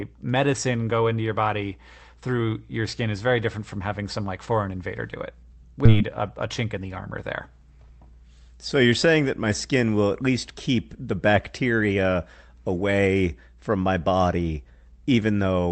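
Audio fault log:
5.85 s, skip ahead: Right after "foreign invader do it" playback jumps forward with no gap, dropping roughly 0.7 s of speech. The late audio was discarded while newer audio was already queued, so both sides of the cut are joined directly.
5.95 to 7.48 s, jitter buffer speed-up: Speech runs at 107% speed with unchanged pitch and sounds hurried. The buffer held more audio than its target, so the receiver repeatedly removed pitch-period-length pieces, roughly a tenth of a second in total, to reduce delay.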